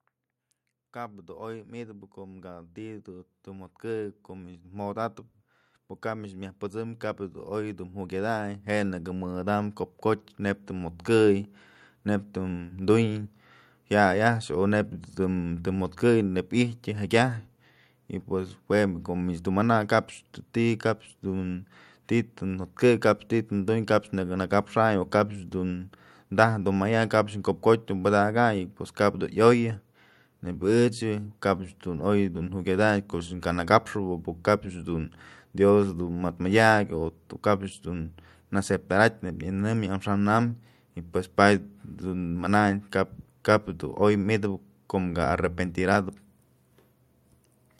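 From 0.93 s to 42.33 s there is automatic gain rising. The gain control treated the input as too quiet and kept raising its gain slowly, about 22 dB in total over roughly 41 seconds. Because the gain acts on the whole signal, speech and background noise swell together. The level climbs steadily through the clip, and the noise floor ends up noticeably louder than at the start.

At 45.92 to 45.96 s there is a brief case of chunks out of order. A 20 ms chunk of audio was delivered or written one chunk late, so it plays after the chunk that should have followed it. No audio is lost, but the two pieces are swapped. That creates hard joins at the boundaries, heard as a short garbled stutter in the speech.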